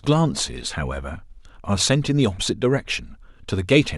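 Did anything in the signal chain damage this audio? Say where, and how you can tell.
No, nothing damaged this audio.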